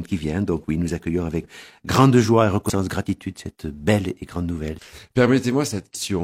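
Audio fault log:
1.40 s, 2.65 s, 4.74 s and 5.90 s, compressed frames skipped: at each point the audio jumps forward, dropping roughly 150 ms, 200 ms, 100 ms and 200 ms, which fits the loss of whole frames of about 46 ms. A waveform shows a sudden discontinuity in the envelope, and a spectrogram shows a vertical mark where patterns break off abruptly.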